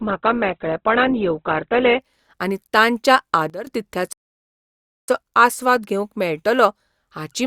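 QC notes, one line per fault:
0.00–2.00 s, adaptive stream starting at a low bitrate: the player opened on a thin stream to start fast, and the sound points to roughly a 12 kbit/s Opus rendition. Nothing reaches above 4.1 kHz, so the speech is muffled and artefact-heavy until quality steps up abruptly, seamlessly, just before "आनी तांच्या", consistent with a switch to around 64 kbit/s.
3.50–3.67 s, sudden gain jump: a digital level change was applied instantly with no ramp, likely a setting change or bit shift in the gain stage. Right after "आनी तांच्या", speech and background noise drop together by about 12 dB for roughly 0.17 s.
4.13–5.08 s, playback stall: the output ran dry for about 0.96 s, likely because the player's buffer emptied or its thread was blocked. The speech cuts off mid-flow into silence, then resumes with "आस्वाद घेवंक मेळटलो".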